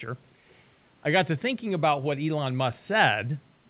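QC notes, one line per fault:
0.49–0.54 s, echo leak: a brief, very faint delayed copy of the speech, about 344 ms late, most likely an echo canceller letting loudspeaker pickup through.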